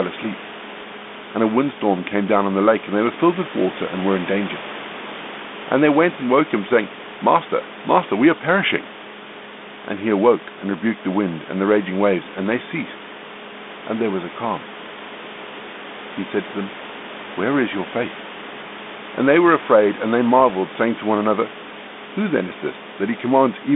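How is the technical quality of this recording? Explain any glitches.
There is one glitch. The speech sits in a narrow telephone band, about 200 Hz to 3.6 kHz, consistent with a 32 kbit/s G.726 ADPCM link, with room noise about 15 dB below it.

From 20.40 to 20.54 s there are pops and a rough, jumpy burst. These are bit errors on the ADPCM link: flipped bits knock the decoder's step size and predictor astray for some milliseconds.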